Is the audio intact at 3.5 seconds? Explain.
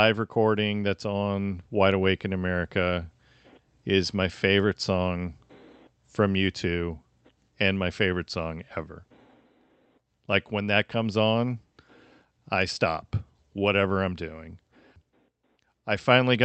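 Yes, the speech at 3.5 seconds is intact, with no dropout, glitch or other fault at that moment, only the ordinary band-limited sound of a call path carrying it as Opus, here limited to about 8 kHz.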